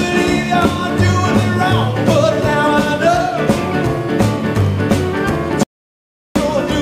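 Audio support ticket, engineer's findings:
Audio dropout to silence, 5.63–6.36 s. Signal cuts out abruptly mid-flow, roughly 0.72 s of digital silence, no room tone, then audio resumes abruptly. Likely cause: input lost upstream (device disconnect, link failure or stray mute) while recorder kept writing zeros. Waveform: flat line between hard edges. Spectrogram: dark vertical band across all frequencies. Content in gap unrecoverable.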